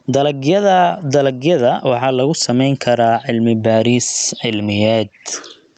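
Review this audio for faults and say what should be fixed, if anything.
Gain pumping runs through the whole clip. The level swings by around 15 dB, leaving the loud and quiet parts squashed together. The likely cause is input gain set far too high, with a fast limiter or compressor clamping down on each peak. The call codec's top end stops near 8 kHz, which is separate from the pumping. To prevent it, lower the microphone's input gain so the limiter rarely engages, or slow its attack and release.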